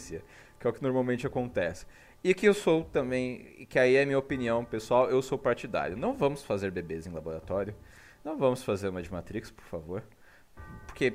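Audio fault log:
No faults heard.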